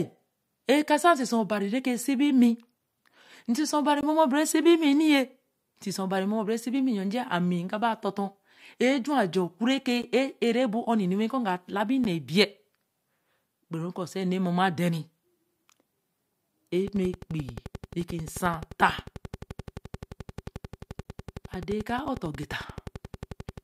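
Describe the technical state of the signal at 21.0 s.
At 21.0 s two faults overlap. A train of clicks runs from 16.88 s to 23.59 s: a regular ticking at about 11.4 clicks per second, some seventy pulses in all, with peaks roughly as loud as the speech itself. Because the pulses are evenly spaced and near-identical in shape, they come from an external repeating source, most likely electrical interference from nearby equipment or a faulty connection or power supply. The ticking stays audible in the pauses between phrases as well as over the speech.

At 21.03 s there is also a gap between stream segments. Two consecutive segments' time stamps leave a hole of 19.2 ms, and the player fills that hole with digital silence. The result is a brief, hard-edged dropout in the speech rather than a fade. No audio content is lost; the timeline is just stretched by that amount. Its placement fits a stream cut into one-second segments, with the misalignment at one segment boundary.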